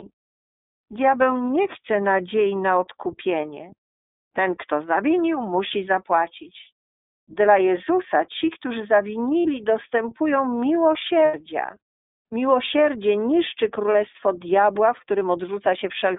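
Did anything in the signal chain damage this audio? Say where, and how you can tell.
Yes. At the codec stage, the whole clip carries iLBC codec damage that is plainly audible: the speech sounds rough and slightly synthetic. A spectrogram shows a hard ceiling near 3.7 kHz with little below 300 Hz, which fits iLBC's 13.33 kbps mode with 30 ms frames.

At the network stage, there are lost iLBC frames at 9.42 to 9.46 s, 11.25 to 11.35 s, and 13.92 to 13.95 s. Each gap sounds like a briefly held, buzzy vowel, then the voice is right again almost at once. The decoder repeated the last pitch cycle with added noise. On a waveform that shows as repeating, noise-roughened cycles, fading across the 90 ms gap. The spectrogram shows flat, frozen harmonic stripes. The gap lengths fit one, three and one lost 30 ms frames.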